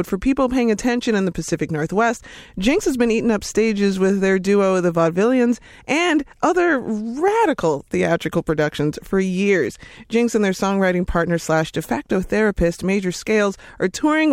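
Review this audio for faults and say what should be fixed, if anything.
At 0.82 s, between "for people paying" and "in the", there is a brief click with a buzzy edge. This is a repeated buffer. New audio failed to arrive in time, so the output replayed its last block, a piece only about 1.45 ms long, three extra times in a row. That fits a 64-sample buffer. The hard joins at each repeat make the click, and a few milliseconds of real speech are lost in its place. A larger playback buffer or higher scheduling priority for the audio thread would prevent these underruns.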